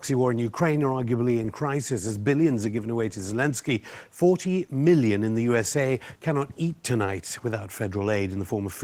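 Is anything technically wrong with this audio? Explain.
Yes. Throughout the speech, Opus voice compression at a low bitrate, consistent with roughly 16 kbps in hybrid mode, codes the excitation coarsely, leaving the voice plainly hoarse, muffled and slightly robotic.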